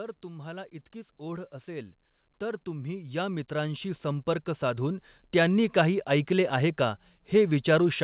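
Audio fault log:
0.21–5.71 s, automatic gain rising: The level climbs steadily by about 18 dB. The gain control judged the input too quiet and kept raising it. Speech and background noise swell together, within a call path whose band stops near 4 kHz.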